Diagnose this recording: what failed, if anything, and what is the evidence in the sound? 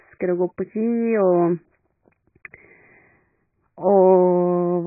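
The speech sounds dull and muffled throughout, with nothing above 2.5 kHz and a smeared, warbling texture on sustained sounds and sibilants. At the codec stage, this is likely heavy AAC compression, consistent with AAC-LC near 12 kbps, where the encoder drops the highest bands and quantises coarsely.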